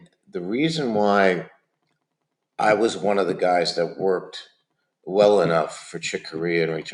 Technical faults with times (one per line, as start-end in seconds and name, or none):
0.00-6.93 noise suppressor applied to music or sounds
0.00-0.35 sound cut by the noise suppressor
1.46-2.03 sound cut by the noise suppressor